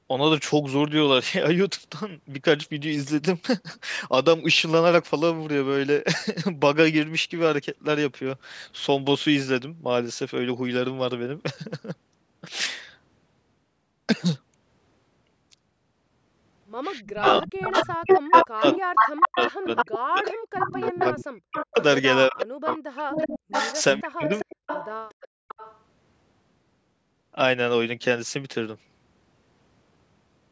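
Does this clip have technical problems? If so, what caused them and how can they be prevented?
Yes. From 17.09 to 21.84 s and again from 22.42 to 25.79 s, a delayed copy of the speech trails behind it. The echo arrives 361 ms late and then 377 ms late. It is about as loud as the original at first and then a little quieter. This is an echo leak, likely from a loudspeaker-side echo canceller that let its microphone pickup through. Using a headset or a better-tuned canceller prevents it.

Between 17.12 and 24.58 s, the speech dips and breaks up for about five seconds in total, falling by around 40 dB at its deepest. This is speech suppressed in double talk: with both sides talking, the canceller likely muted the talker along with the echo. Full-duplex-capable echo cancellation or headsets avoid this.

From 25.28 to 25.48 s, the room sound drops out briefly, by about 36 dB. This is background gated by the echo canceller, which clamped the microphone while the loudspeaker played. 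Gentler suppression settings prevent it.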